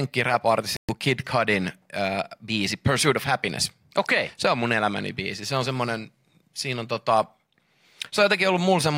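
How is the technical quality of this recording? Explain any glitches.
The recording has one glitch, a Bluetooth dropout near the start. From 0.77 to 0.90 s the speech cuts to silence for roughly 0.12 s, which fits about eight lost audio frames. The likely cause is packets failing to reach the headphones in time and being discarded. The speech then resumes further along, as if it had kept playing underneath. A waveform shows a flat gap with abrupt edges or a fade of a few milliseconds, and a spectrogram shows a blank vertical band across all frequencies.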